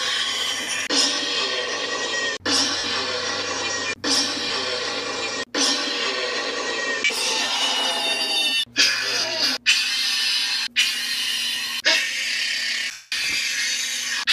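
Lost LE Audio frames at 0.61, 2.78, 4.48, 9.20, 11.13 and 12.91 s: the LC3 decoder fills each 10 to 210 ms gap by reusing the last spectrum with random signs, heard as brief noisy smears, the longest fading toward silence.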